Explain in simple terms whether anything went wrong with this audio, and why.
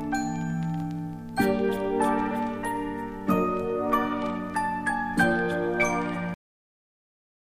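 The recording has a cut-off end: the last stretch of audio was never written out, so playback stops abruptly at 6.34 s. The sound breaks off mid-way with no natural fade, and the final 1.2 seconds are dead digital silence.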